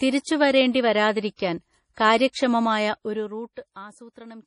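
Throughout the speech, heavy codec damage is audible, likely from MP3 compression. It sounds watery and swirly. Nothing remains above 10.5 kHz, which fits a 32 kbps bitrate.

Pre-echo occurs at 1.36 to 1.39 s, 1.94 to 1.97 s, 2.32 to 2.35 s and 3.74 to 3.76 s. Block noise leaks 20 to 36 ms ahead of each attack, heard as brief hiss.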